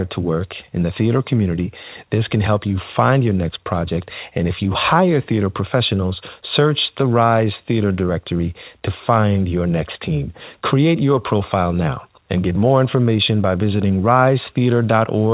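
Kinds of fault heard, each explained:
No faults can be heard.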